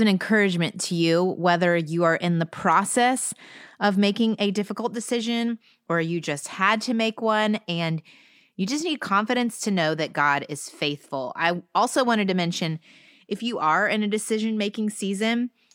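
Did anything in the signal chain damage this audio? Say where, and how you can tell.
No, no signal-chain damage detected.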